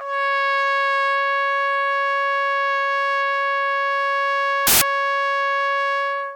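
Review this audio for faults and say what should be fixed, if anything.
Between 4.67 and 4.82 s the music turns into a loud burst of harsh broadband noise. Those are samples built from the wrong bytes, with the byte order or alignment misread so the noisy low bits dominate. To prevent it, check the sample format, endianness and frame alignment wherever the stream gets decoded or spliced.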